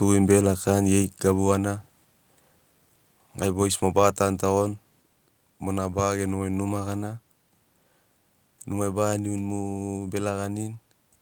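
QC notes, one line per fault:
1.02 s microphone volume stepped down. The speech and the background drop together by about 3 dB in one step. The level lands lower and stays there. The likely cause is call software cutting the device's input volume after judging it too hot.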